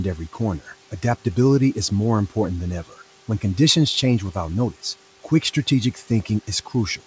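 Between 5.94 and 6.29 s, the noise suppressor mistakes part of the speech for background and turns it down along with the room noise, which sits about 23 dB below the voice. About 150 ms of the speech is affected, with dips of up to about 9 dB, so the affected speech sounds swallowed and faint. Unlike a packet dropout, the sound never goes fully silent or breaks off abruptly. It thins out and the background drops with it.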